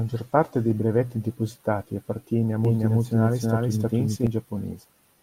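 Speech with a doubled audio track from 2.65 to 4.27 s: an equally loud, full-band copy trails about a third of a second behind, likely from a second, slower capture path. On a spectrogram every syllable repeats as a shifted twin, starting and stopping abruptly.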